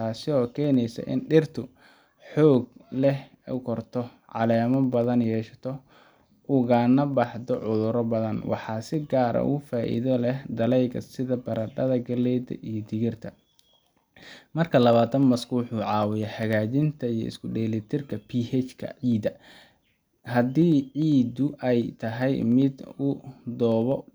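Periodic USB or driver dropouts run from 0.15 s to 24.02 s, one every 0.1 s. Each time the audio path stalls briefly and a tiny fraction of a millisecond of speech is skipped, leaving a steady ten-per-second ticking heard only while speech is present.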